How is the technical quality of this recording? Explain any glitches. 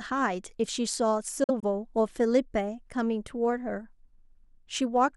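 There is one glitch in this speech recording. Between 1.44 and 1.64 s the sound cuts out in short gaps, about 70 ms missing in total, the longest single hole about 46 ms. This is likely a Bluetooth dropout: a few packets arrived too late for the headphones and were discarded, leaving silence until valid data returned. Speech resumes as though it had kept running, so syllables sound clipped rather than delayed. On a waveform and spectrogram these appear as vertical blank strips across all frequencies.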